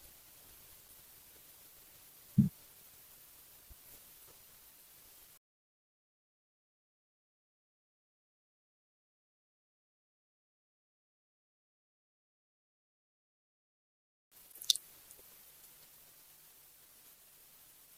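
No technical faults are audible.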